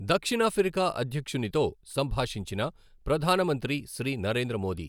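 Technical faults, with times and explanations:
No technical faults can be heard in the recording.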